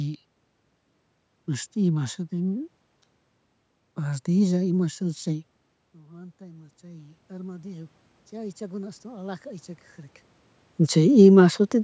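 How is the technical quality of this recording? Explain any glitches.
There's one real glitch here, an automatic gain rising episode between 5.97 and 9.73 s. Just before it, around 5.5 s, the talker seems to move away from the mic, and the level drops by about 24 dB. The gain control responds by slowly pushing its gain up, roughly 10 dB over nearly four seconds. You hear the voice and the room noise swell together as it climbs back. Then around 10.5 s the talker moves again. The whole thing has the call-mic character, with nothing above 8 kHz.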